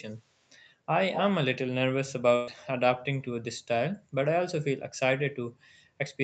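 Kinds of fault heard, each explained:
Echo leak, at 0.37–0.45 s and 1.13–1.22 s: a delayed copy of the speech trails it by 238 ms, very faint at first, then at 1.13 s nearly as loud as the speech itself. This is likely the far end's echo canceller letting loudspeaker sound back through its microphone.
Burst of packet loss, at 2.35–2.50 s: 120 ms of audio failed to arrive in time, so the receiver extended the last sound for 115 ms, fading it rather than going silent, before the speech resumes further on with that stretch missing.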